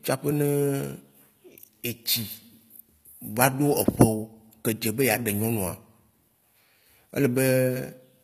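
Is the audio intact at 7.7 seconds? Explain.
No, at 7.7 s the speech carries the gritty, lispy treble of HE-AAC compression, likely a low bitrate around 24 kbps, with rebuilt highs and nothing above 14.9 kHz.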